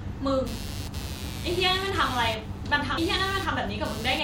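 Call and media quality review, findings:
Computer activity noise, 0.47 s to end of clip: buzzing at roughly 100 pulses per second, about 15 dB below the speech. Probable component: the shared ground between computer and audio interface, modulated by processor, graphics or mouse load, so it follows machine activity, not the speech.

Compressed frames skipped at 0.85 s and 2.97 s: the audio jumps ahead, with a short smeared blip at each join rather than a hard click. Skips of around 50 ms and around 300 ms fit two and ten 26.1 ms codec frames dropped as missing or rejected as damaged by the decoder.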